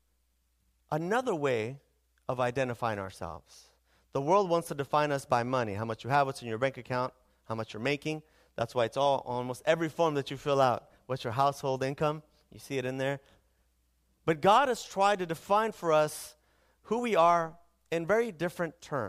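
No technical faults can be heard anywhere in the recording. There is nothing in it that needs a timestamp or a description of something going wrong.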